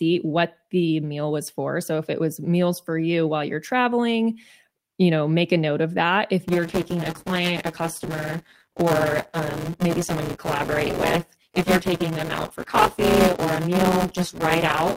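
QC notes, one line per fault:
6.48–14.97 s, buffer tearing: after "note of that if", about a third of each period replays audio roughly 10 ms old, producing a 172 Hz robotic buzz that fits a 256-sample buffer. The waveform shows hard joins at regular intervals, and the spectrogram shows evenly spaced vertical splice lines.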